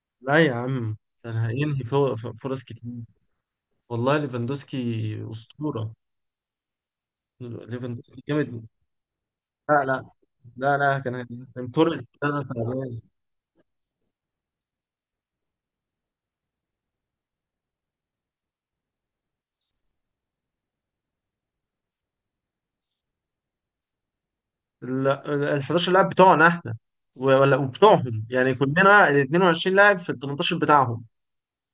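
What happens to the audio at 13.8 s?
Nothing goes wrong at 13.8 s: the speech carries on without any dropout, click, distortion or other fault at that point.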